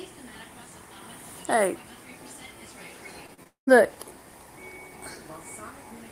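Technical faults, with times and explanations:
3.27–3.69 s, repeated packet loss (robotic sound): four holes, the longest about 197 ms, mostly patched by repeating prior sound, giving a choppy texture with pieces missing rather than clean silent dropouts.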